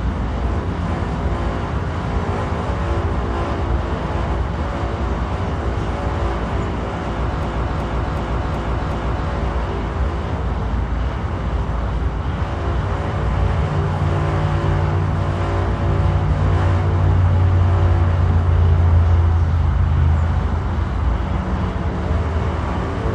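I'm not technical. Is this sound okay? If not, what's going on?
No, there's a system hang loop from 7.43 to 9.29 s. The computer briefly froze while the sound hardware kept replaying its last chunk, so one piece about 0.37 s long repeats five times, making a choppy stutter nearly three times a second.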